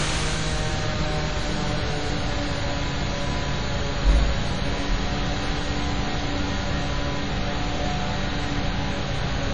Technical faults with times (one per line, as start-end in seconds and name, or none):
0.00-9.54 WMA compression